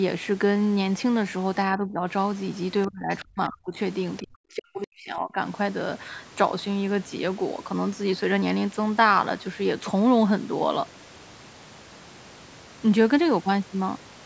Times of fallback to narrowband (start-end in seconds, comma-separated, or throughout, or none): none